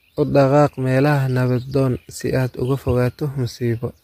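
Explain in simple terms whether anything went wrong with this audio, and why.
Likely low-delay AAC compression, the kind used for video calls, squeezed this speech throughout, leaving it audibly rough and grainy, with nothing above 15.6 kHz.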